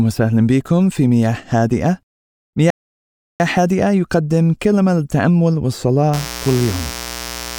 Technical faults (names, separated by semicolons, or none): rebuffering stall; mains buzz